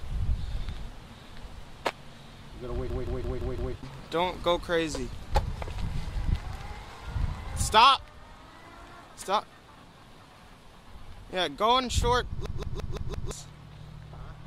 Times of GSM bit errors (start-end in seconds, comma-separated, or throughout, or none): none